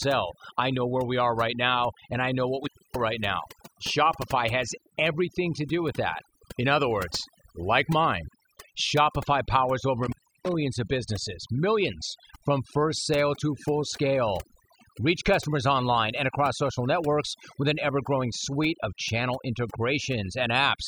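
Overdone noise removal runs through the whole of this speech recording. The noise reduction was set so aggressively that any frequency band near its noise estimate is pulled down or switched off, leaving near-silent gaps dotted with twinkling specks. Intermittent contact interrupts it twice, as a loose cable or plug briefly opens the line. From 2.63 to 3.0 s, between "and I know what" and "right now", the signal cuts out for about 280 ms with crackle at the edges. From 10.03 to 10.54 s, just before "of businesses millions from", it drops again for about 320 ms.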